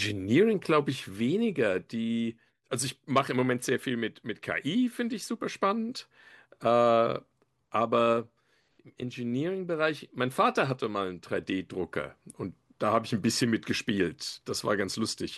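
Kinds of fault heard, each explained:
No technical faults are audible.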